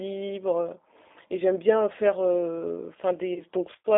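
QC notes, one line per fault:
throughout: G.729 codec. The speech sits in a narrow telephone band, roughly 250 Hz to 3.7 kHz, with plainly audible roughness and a slightly synthetic, buzzy texture, which fits an 8 kbit/s G.729A coder. The decoder rebuilds each 10 ms frame from a vocal tract filter, a pitch predictor and a few pulses. Plain band-limiting would only sound muffled, but this also makes the speech sound grainy and artificial.
3.34–3.42 s: VoIP packet loss concealed by the speech codec. For about 20 ms, which points to a single lost packet, there is no silent gap. The decoder stretches the last sound forward from its stored pitch and filter, lowering the level frame by frame. Each frame builds on the previous one, so the speech stays weak and colored until about 3.42 s. A hard dropout would leave an abrupt hole, not this smeared, fading tail.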